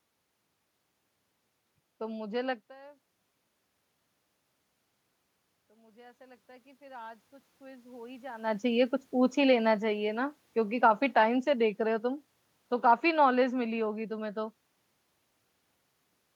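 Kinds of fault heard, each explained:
automatic gain rising: The gain control heard a much quieter input, which fell by about 23 dB, and slowly raised its gain by about 10 dB between 5.68 s and 8.58 s. The voice and the room noise swell together over nearly three seconds. That shared, gradual rise sets it apart from a talker moving closer, where the voice would get louder quickly while the room noise stayed at the same level.
automatic gain falling: Right after the rise, from 8.6 s to 12.12 s, the gain control judged the input too loud or its background too strong and pulled its gain down by about 5 dB. The speech starts loud and then sinks over about three and a half seconds, and the background sinks with it. A talker moving, as happens around 8.5 s, would change only the voice, not the room noise.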